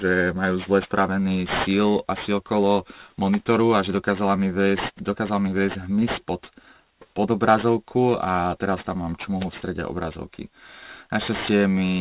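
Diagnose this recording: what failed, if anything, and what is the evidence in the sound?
Aliasing, from the start of the speech to the end, points to a sample-rate conversion stage. Sibilants come out gritty and metallic, with energy packed right up to a hard edge at 4 kHz and folded components sitting about 15 dB below the wanted signal. That fits a downsample from 44.1 kHz to 8 kHz with no anti-alias filter: content above 4 kHz was not removed and reflected back below it as unrelated frequencies.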